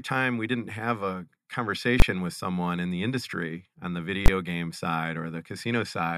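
At 2.00 to 2.02 s, just before "with someone in the", and again at 4.26 to 4.28 s, between "the industry on the" and "game side", the speech shows invalid numbers at full scale. A calculation produced infinite or invalid values, and each 20 ms block sits flat at one extreme level, far beyond the speech peaks. Because each block is so short, the two pops at its edges fuse, and each event is heard as a single loud bang.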